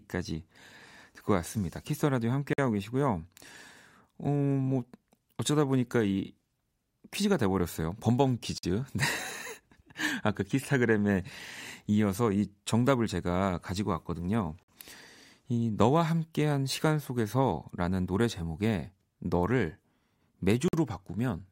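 At 2.53–2.58 s, 8.58–8.63 s, 14.63–14.68 s and 20.68–20.73 s the speech drops out for 50 ms each time, a gap between chunks. The audio arrives in 6-second blocks, with a short stretch of silence left at each join. Nothing is lost, but the flow stops dead. Each hole recurs at a steady rhythm, which makes it sound mechanical.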